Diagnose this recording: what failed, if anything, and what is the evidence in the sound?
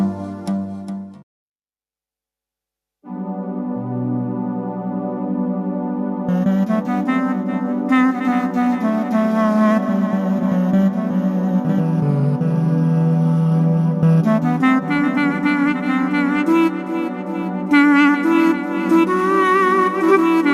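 Nothing in the signal chain shows a failure: no dropouts, clicks, clipping, hum or timing breaks are audible anywhere in the recording.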